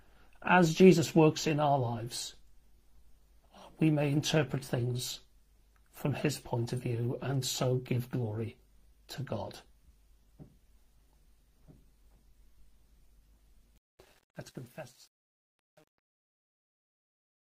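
From 13.76 s to the end at 17.45 s, the tail of the fade-out turns gritty and coarse. From 14.14 s onward it grows worse rather than decaying cleanly. This is truncation distortion on a fade. The gain stage keeps only about 9 bits with no dither, so the quietest part of the waveform collapses into a few square steps.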